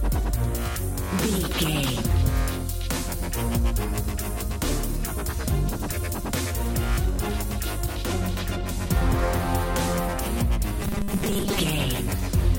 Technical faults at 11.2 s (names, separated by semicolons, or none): robotic sound from repeated short buffers